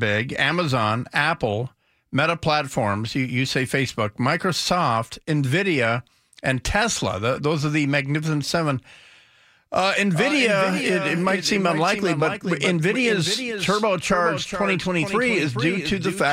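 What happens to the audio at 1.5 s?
Nothing goes wrong at 1.5 s; the speech plays through that moment intact, with no dropout, glitch or distortion.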